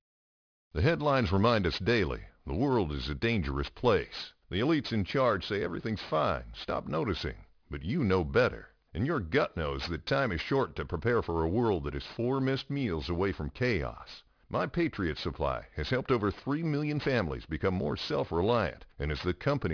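Aliasing runs through the whole speech clip from start to finish. The audio appears to have been resampled downward, which fits a drop from 48 kHz to 11 kHz, without a low-pass filter first. Content above the new 5.5 kHz limit has folded back into the band as false, unrelated tones, sitting roughly 20 dB below the speech. Sibilants sound gritty and metallic. On a spectrogram, energy runs hard up to a sharp 5.5 kHz ceiling, with mirrored streaks inside the band.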